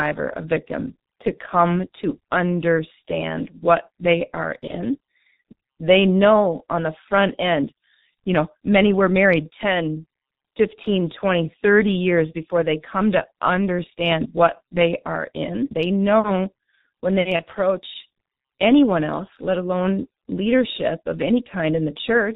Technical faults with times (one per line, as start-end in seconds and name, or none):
0.00-22.36 G.723.1 codec
4.67-4.75 VoIP packet loss concealed by the speech codec
17.36-17.44 VoIP packet loss concealed by the speech codec